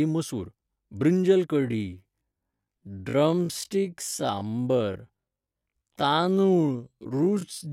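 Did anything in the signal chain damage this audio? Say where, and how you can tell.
Yes. A time-stretched section most likely comes from processing software slowing the speech to half speed while holding pitch. From 1.55 s, just after "मसूर बृंजल", through to the end, up to "दिवपाखातीर तूप", the pace abruptly halves at unchanged pitch, so the speech drags.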